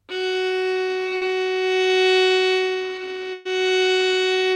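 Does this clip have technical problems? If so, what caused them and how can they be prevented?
Yes. From 1.17 to 1.23 s there is a short concealed packet loss: about 40 ms of audio never reached the decoder in time, so the receiver covered the hole by extending the sound that came just before it, then cross-faded back into the real signal. In the clip this comes across as a brief smear rather than a gap, with a small slice of the original sound replaced by a continuation of what preceded it. A deeper jitter buffer or in-band forward error correction would help prevent it.

From 3.33 to 3.47 s a burst of packet loss took out about 120 ms in one stretch. The receiver again continued the last sound it had, letting it fade as the gap lengthened instead of dropping to silence, and then playback picked up further along. The result is a held, decaying tail standing in for the lost section, followed by an abrupt jump where the intervening audio is simply gone. 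Redundant packet transmission on a steadier, less congested network path would help prevent such bursts.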